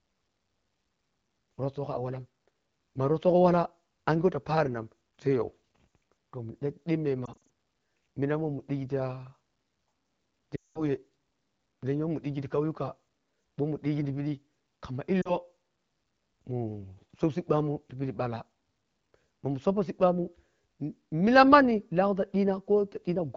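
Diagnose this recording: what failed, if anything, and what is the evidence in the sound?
Lost AMR speech frames (network): warbles at 7.25 and 15.21 s, a fade at 10.55–10.84 s; concealment repeats pitch with falling gain, seen as frozen, fading harmonics.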